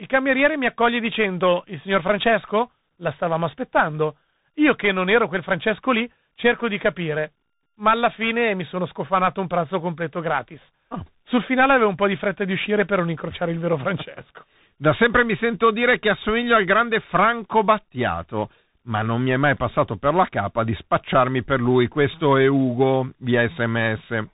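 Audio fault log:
throughout, tandem speech coding: the speech went through CVSD twice with G.711 A-law between, each stage recoding the last one's errors, leaving it rough and noisy, with nothing above 3.8 kHz.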